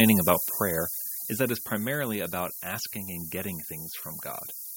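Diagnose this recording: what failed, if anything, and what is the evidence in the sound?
The speech runs throughout with low bit depth with noise shaping, introduced at sample-format conversion. A steady, thin hiss sits under it, climbing steeply toward the top of the band and roughly as loud as the speech itself. The coarse quantisation fits a 5-bit word, with the rounding error fed back and pushed upward in frequency. On a spectrogram this shows as a constant noise floor brightening strongly toward the highest frequencies. The waveform looks coarsely stepped.

In the call-processing stage, automatic gain falling shapes the opening. From 0.05 s to 1.98 s the level sinks steadily by about 11 dB, and the background drops with it. That points to an automatic gain control that judged the input too loud, or its background noise too strong, and eased its gain down gradually rather than in one step. 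The waveform envelope shows a smooth downward taper over those two seconds, and the spectrogram darkens across all frequencies together.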